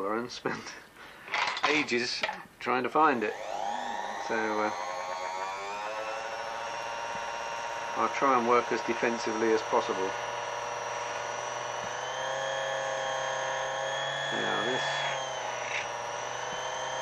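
Nothing in the audio stood out as a technical problem on listening.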